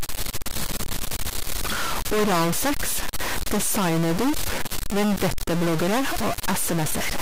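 From the first moment to the last, the speech carries a harsh, buzzy distortion, and even the pauses are full of gritty noise instead of going quiet. That points to a stuck bit, likely one data bit jammed at 0 or 1 in the converter or a line feeding it. Roughly half the samples land off by that bit's weight, a fairly high step of about −20 dBFS, so the buzz follows the waveform and the gaps fill with noise.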